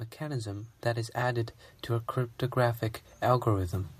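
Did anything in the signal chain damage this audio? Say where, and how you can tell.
Yes. Automatic gain rising in the call-processing stage, from 0.19 s to 1.59 s. The level climbs by about 6 dB over those 1.4 seconds, and the background noise swells along with the speech, which points to a gain control raising the whole signal rather than the talker getting louder. On a waveform the envelope widens steadily across that span. On a spectrogram the noise floor between syllables brightens together with the speech bands.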